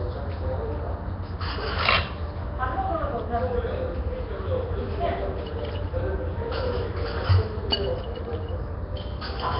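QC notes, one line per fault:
Throughout, Nellymoser compression: the audio has a rough, hissy halo and a smeared, underwater quality, with nothing above 5.3 kHz. This is likely the Flash-era Nellymoser Asao codec, whose heavy damage fits a rate near 22 kbps. The codec spends a fixed two bits per sample across 256-sample blocks, so weaker bands get no bits and are refilled with noise, which leaves that grainy hiss and blurs detail over time.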